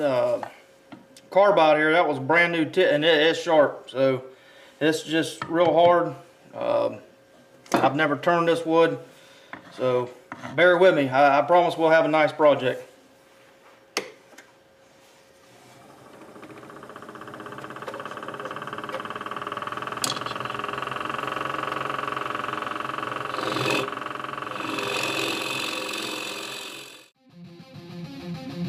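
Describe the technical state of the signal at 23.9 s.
At 23.9 s the signal is intact, with no audible technical fault at that moment.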